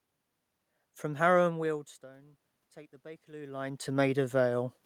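From 0.79 to 4.43 s, voice and room noise swell together. This is automatic gain rising: the input dropped about 21 dB, and the gain slowly climbed about 7 dB to compensate.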